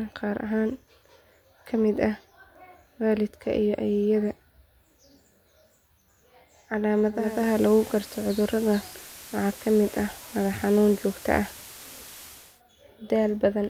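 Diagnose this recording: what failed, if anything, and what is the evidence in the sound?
Digital radio blending to analogue, at the reception stage: from 7.11 s to 12.62 s a 378 ms cross-fade swaps in the FM broadcast, bringing hiss roughly 20 dB down and a level shift of about 3 dB. The smooth fade distinguishes it from a codec dropout.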